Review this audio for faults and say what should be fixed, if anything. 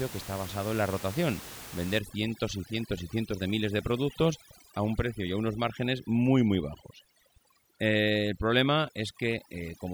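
Overdone noise removal starts at 1.99 s, right after "basado en la rotación", and runs to the end. The room noise sat about 16 dB below the speech. The reduction was set too hard for that level. Frequency bands close to the noise estimate are pulled down or gated off. Quiet parts of the speech vanish with them. The background drops and breaks up into twinkling specks. To prevent it, lower the reduction strength and check the result by ear.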